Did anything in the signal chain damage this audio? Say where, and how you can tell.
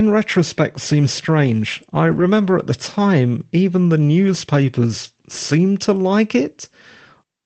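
Yes, in the network stage: a lost packet rebuilt from error correction, from 2.07 to 2.21 s, between "retrospect seems strange I" and "at the time even". The decoder played the low-bitrate Opus copies carried in later packets, so there's no gap. That stretch sounds rougher and noisier, fitting about four lost packets and 80 ms rebuilt.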